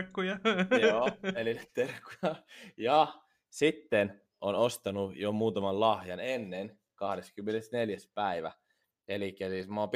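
Speech, marked by a click roughly every 1.99 s from 1.63 s to 9.60 s, about five in all. These are clock drift buffer slips, likely caused by two devices running on independent clocks about 200 ppm apart, so the buffer between them drifts until a tiny block of about 15 samples is dropped or repeated. Unlike random packet loss or dropouts, the clicks are brief, leave no gap and arrive at a steady interval.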